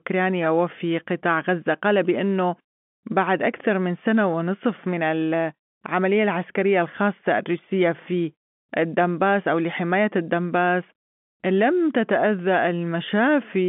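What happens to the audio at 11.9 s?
Nothing goes wrong at 11.9 s: the speech carries on intact through that moment, with the narrow telephone band of the G.711 line sounding just as it does around it.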